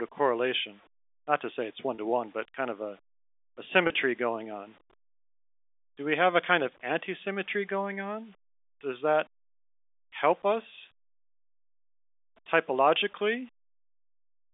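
Across the whole clip, a grainy, signal-following roughness sits about 40 dB below the speech and is most audible in quiet passages and decays. This is low bit depth without dither, likely rounding to about 9 bits. On a spectrogram it appears as broadband fuzz that rises and falls with the speech envelope rather than as a steady noise floor.

At 1.95 s, between "to say it's one" and "to one but kind", and again at 3.87 s, between "kind of a a" and "going on", there is packet loss with pitch repetition. A 30 ms gap is bridged by repeating the last pitch period, which sounds like a brief buzzy hold. On the waveform each one shows as repeating cycles that fade in level, and on the spectrogram as flat, frozen harmonic stripes.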